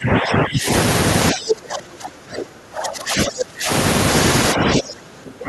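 From 0.0 to 0.7 s, 1.32 to 3.7 s and 4.53 to 5.48 s, the speech dips by up to about 15 dB and then about 25 dB. This is likely speech suppressed in double talk: the echo canceller could not separate this side's speech from the overlapping far-end echo and turned both down.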